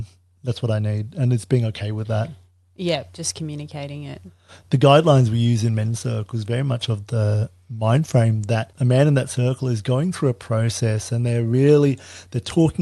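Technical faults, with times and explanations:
Throughout: clock drift between sender and receiver. The sending side's clock runs roughly 4 percent fast, so audio reaches the receiver slightly quicker than it is played out. The jitter buffer keeps filling up, and the receiver has to drop short slices of sound to keep up. Those small, unevenly spaced hiccups across the whole clip are the result. The Opus call path behind it adds its coding noise and limits the band to about 12 kHz.
0.01 to 12.81 s: repeated timing corrections. Playback is effectively sped up to 104 percent of the original pace, achieved by repeatedly cutting out brief pieces rather than by smooth resampling. Every edit goes the same way, removing material, but they are irregularly spaced. Each is tiny, so it is heard, if at all, as slight hiccups or a slightly unsteady rhythm instead of obvious gaps or dropouts.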